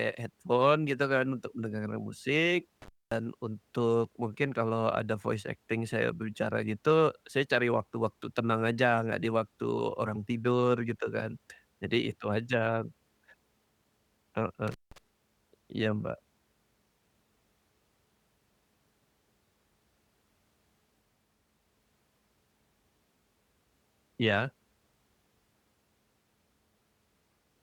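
At 2.82 s, just after "mendengarkan musik", and again at 14.68 s, the speech drops out through an intermittent contact: a loose connection opens for about 230 ms and then about 170 ms, leaving faint hiss, with crackle as contact breaks and returns.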